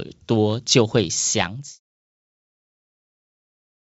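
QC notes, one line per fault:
No faults noted; the speech sits within the call codec's bandwidth with nothing above 8 kHz, and its level tapers smoothly from about 1.5 s to nothing by 1.8 s.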